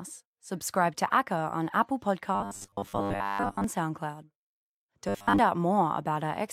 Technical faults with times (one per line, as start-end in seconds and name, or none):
2.35-3.64 robotic sound from repeated short buffers
5.09-5.39 robotic sound from repeated short buffers